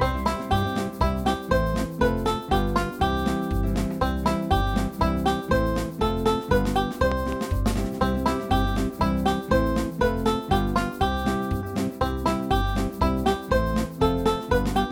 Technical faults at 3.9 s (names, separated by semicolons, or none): none